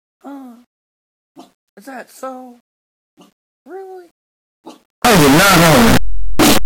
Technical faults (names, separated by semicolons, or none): signed and unsigned mixed up